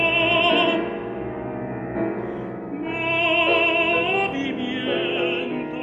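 No technical faults occur at any point, so there is nothing to describe in time order.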